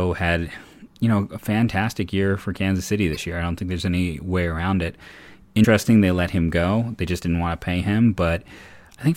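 Damaged data in a compressed stream causes short glitches at 0.69–0.74 s, 3.12–3.17 s and 5.63–5.65 s in the speech. Corrupted bytes make the decoder misread frames and lose sync until it finds the next valid frame header.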